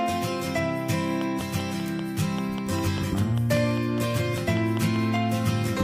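Something in the chain is likely injecting a repeating pulse, most probably interference from nearby equipment or a faulty connection or power supply, producing a train of clicks from 1.21 s to 5.17 s. The clicks arrive at a steady pace of about 5.1 per second, some twenty in all, each with much the same shape. They stand out well above the sound, peaking around 10 dB over it, and come through as a regular ticking that carries on through the pauses.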